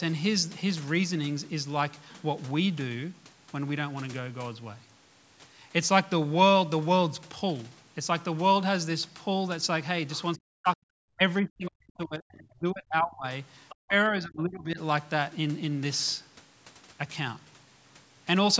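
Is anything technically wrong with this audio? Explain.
Yes. Speech suppressed in double talk occurs at 10.35–10.83, 11.15–11.21, 11.41–13.25, 13.87–13.93 and 14.1–14.79 s. The level drops by up to about 40 dB, likely because the echo canceller ducked the talker while both sides spoke. The waveform shows sudden hollow gaps and the spectrogram shows faded bands.

The other side's voice is leaking through at 11.65–11.71 and 13.69–13.76 s. These are faint scraps about 20–25 dB below the speech, likely residual loudspeaker echo. They appear as thin, isolated smudges on the spectrogram.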